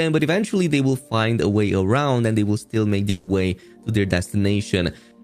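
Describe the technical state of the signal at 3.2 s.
At 3.2 s a long network dropout likely stopped packets arriving from 3.09 to 3.29 s; the receiver stretched the last sound into a fading buzz, and that stretch is lost.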